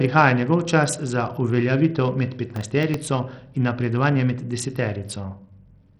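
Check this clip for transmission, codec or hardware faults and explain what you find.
Two faults are present: a heavy codec degradation across the whole speech clip and a short burst of crackle near the middle.

Throughout, the speech sounds dull and gritty, with treble that drops out and flickers and a gritty haze of noise and aliasing riding on the sound. This is likely Bluetooth SBC compression at a low setting, which fits a bitrate around 64 kbps. With too few bits, the codec starves its upper sub-bands and quantises the rest coarsely, leaving noise and aliasing. On a spectrogram, the top bands look ragged and patchy, switching on and off, over a speckled noise floor.

From 2.56 to 2.94 s there is processor overload crackle: a gritty tearing lasting about 0.38 s, which then stops cleanly. The processing could not finish its tiny buffers, each under a millisecond long, on time, and several deadlines were missed in a row. 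Each miss replayed a fragment of old audio with hard edges. The waveform shows small step discontinuities clustered in that span, and the spectrogram shows thin vertical broadband streaks there.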